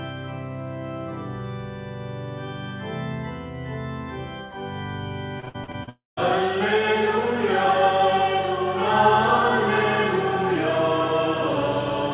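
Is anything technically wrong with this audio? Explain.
Yes. From 5.4 to 5.89 s there is repeated packet loss with a robotic sound. Six short gaps, the longest 56 ms, were patched by repeating earlier sound. The result is choppy and robotic.

Then, from 5.89 to 6.19 s, the sound turns to a fading buzz, then about 170 ms of silence. This is likely a long network dropout. About 280 ms never returns.

Nothing above 4 kHz is heard throughout, which fits a narrowband call codec such as G.711.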